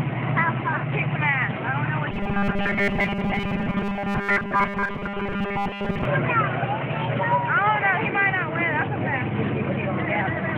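From 2.12 to 6.05 s the sound turns into a rigid metallic buzz at 200 Hz. This is robotic sound from repeated short buffers, likely a 5 ms slice looped while most of the real audio is skipped.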